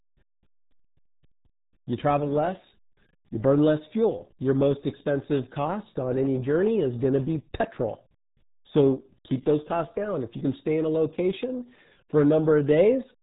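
From start to end, the speech carries heavy RealAudio 14.4 codec damage. Nothing above 3.8 kHz survives, so consonants lose their edge. The voice sounds muffled and gargly. This points to RealAudio 1 squeezing speech to about 8 kbit/s for dial-up modems.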